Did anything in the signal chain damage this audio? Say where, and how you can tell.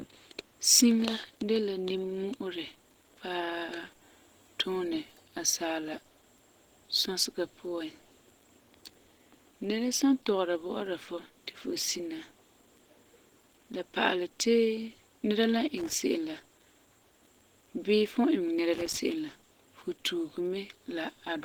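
Yes. Opus compression, heard throughout, is plainly audible damage at the codec stage. The speech has a grainy, hoarse, muffled quality rather than swirling holes. That points to a low bitrate of around 16 kbps, where the encoder likely switches to its hybrid speech mode. Band energy is kept, but fine detail is rebuilt from noise and folded bands, so the voice sounds rough instead of clean.

Loose connector crackle appears at 15.77 to 15.93 s, just before "se'em la", and again at 18.73 to 18.97 s, between "fum n iŋɛ nɛra" and "se'em la fu tuuge". This is analogue wiring. Each short, irregular burst of scratchy crackle comes from a worn or dirty contact making and breaking as it moves, chopping the signal and adding pops from any DC on the line.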